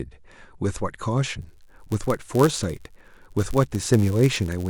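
From 1.41 s to the end of the speech, a block size mismatch (padded) sets in: a stage is handing on blocks slightly shorter than the next stage expects, and the shortfall in each block is filled with zeros. Those regular silent slivers chop the signal into a buzz near 99.6 Hz, the block rate. Because the gaps add time, the speech runs at 0.996 of its proper speed, with its timbre intact.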